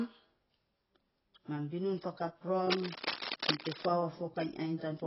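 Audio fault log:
Throughout: AAC compression. The speech has nothing above 5.6 kHz and is dull and smeared, with a warbling, fizzy texture on sustained sounds and sibilants. This is likely a perceptual codec quantising its frequency lines heavily, dropping or noise-filling bands the hearing model treats as expendable. The damage is heavy and fits a very low bitrate, around 16 kbps. The watery swirl inside the remaining band, not just a clean top-end roll-off, separates it from a simple low-pass filter.
2.70–3.86 s: cable scratch noise. For just over a second, dense, uneven bursts of scratching and rustling lie over the speech, roughly as loud as the speech itself. The likely cause is a worn cable, connector or control being moved, so its contact resistance fluctuates rapidly and injects irregular noise into the signal. Its ragged, clustered texture, confined to one stretch, distinguishes it from steady hiss or hum and from isolated single clicks or dropouts.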